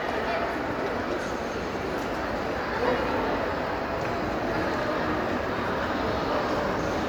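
Throughout, the audio shows generation loss: swirly, hollow smearing and blurred attacks, likely from about three MP3 passes at 128 kbit/s; the top reaches near 20.1 kHz.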